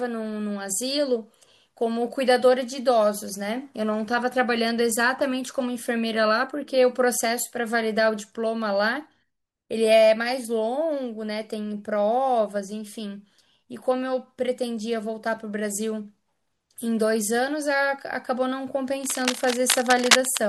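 From 19.04 to 20.40 s, cable scratch noise, likely a worn connector shifting, adds dense, ragged scratching at roughly the speech's level, appearing as irregular broadband bursts on the spectrogram.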